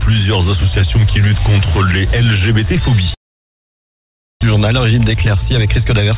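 From 3.14 s to 4.45 s the audio breaks off. What was playing is stretched into a brief buzzing tail that quickly fades, and the rest of that stretch is silence. When sound returns, nearly a second of material is missing. This is likely a long network dropout: packets stopped arriving, the receiver concealed the gap for a moment and then fell silent, and it resumed further on, with the delay shifted by a few tenths of a second.

From 4.54 s to 6.12 s the sound plays noticeably quicker, about 108% of normal speed, at an unchanged pitch, giving it a hurried feel through to the end. This is a jitter buffer speed-up. After the dropout the buffer held more audio than its target, so the receiver repeatedly trimmed out short pitch-period-sized slices, around a seventh of a second in total, to pull the delay back down. Throughout, nothing is heard above 4 kHz, which fits a narrowband G.711 mu-law call path.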